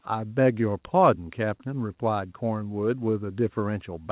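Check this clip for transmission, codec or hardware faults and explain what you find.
Nothing stood out on listening to this speech, which carries the narrow, telephone-band sound expected of a G.711 call path with nothing above 4 kHz.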